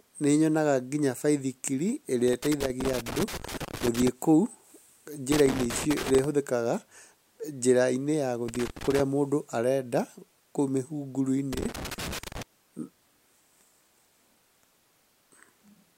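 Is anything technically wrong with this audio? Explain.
Yes. Loose connector crackle breaks into the speech four times: 2.28 to 4.08 s, 5.32 to 6.24 s, 8.48 to 9.00 s just before "mũndũ arenda kũu", and 11.53 to 12.43 s. A worn contact keeps breaking the signal. Each burst sounds like irregular crackle or scratching.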